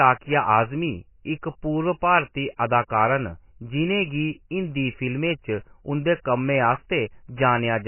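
Throughout the speech, the sound has the watery, swirling quality of MP3 compression, very likely from encoding at a bitrate as low as 16 kbps. Nothing survives above 3 kHz, so the top end stops abruptly rather than rolling off gently as a tape or microphone loss would. The damage is heavy: weak frequency lines flicker in and out between frames, which makes sibilants chirp and turns the texture unstable instead of just dull.

Just after "पूर्व भारती", from 2.57 to 2.59 s, a short hiss arrives about 27 ms before a sharp attack, and the attack itself sounds softened. This is pre-echo. The codec spread the quantisation noise meant for the loud onset across the whole transform block, including the quiet moment before it. Unlike a click or a dropout, it is a smear of noise leading into the onset, not a break in the sound.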